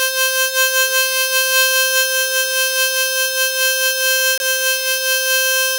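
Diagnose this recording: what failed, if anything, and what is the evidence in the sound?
At the codec stage, the music drops to abrupt silence from 4.38 to 4.43 s, a corrupt frame muted. The decoder rejected damaged frames and the player substituted silence. The roughly 56 ms gap fits two codec frames. Unlike concealment, nothing fills the hole, and the timing after it stays intact.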